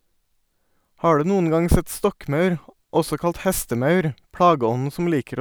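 A single flipped bit in one sample, somewhere in memory or on a digital link, produces a bit error spike at 3.45 s, just after "sett stokkmaur også kalt". The corrupted value leaps by a power of two and returns at the very next sample, reaching about -22 dBFS. Because the jump is one sample wide, its energy spreads across the whole spectrum, so it sounds like a sharp, isolated tick with no relation to the speech around it.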